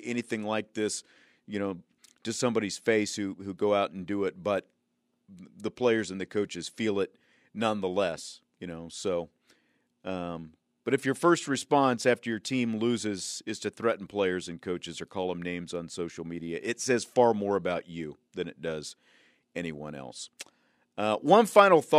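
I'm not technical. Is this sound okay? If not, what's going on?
Yes, this recording has no technical problems. There is nothing here that needs fixing.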